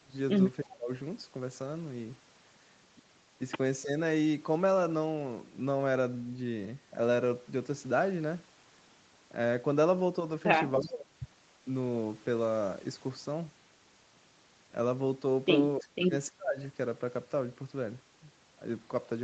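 Speech suppressed in double talk at 0.0, 0.64, 3.82, 10.78, 15.79 and 16.29 s: the speech dips by roughly 10 to 25 dB for about 150 to 400 milliseconds, likely because the echo canceller ducked it during overlapping talk. Echo leak at 10.8 and 15.8 s: faint delayed copies arrive 308 ms late, about 20 and 30 dB below the speech, as short scraps.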